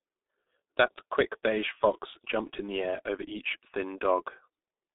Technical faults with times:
0.00-4.94 G.723.1 codec

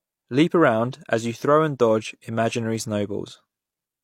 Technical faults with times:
0.92 pre-echo

